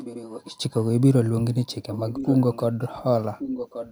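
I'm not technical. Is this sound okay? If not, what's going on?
No, there's an echo leak. A copy of the speech comes back about 1.1 seconds late, from the start to 0.57 s, again from 1.87 to 2.64 s, and from 3.38 s to the end. It's quiet in the first stretch and noticeably louder in the later two. Most likely one side of the call is on a loudspeaker and its echo cancelling didn't fully catch what the microphone picked up, so it got sent back.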